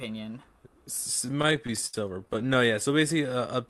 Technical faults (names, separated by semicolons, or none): repeated stalls (stutter)